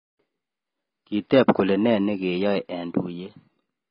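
From start to finish, the speech is dull and band-limited. Nothing is heard above about 5.3 kHz, so sibilants lose their edge and turn soft and fizzy. Heavy coding damage smears the sound. Gaps open in the spectrum, giving a watery, warbling texture on held sounds. The likely cause is AAC compression, AAC-LC coded at a low bitrate. The low cut-off and the depth of damage fit a rate around 16 kbps.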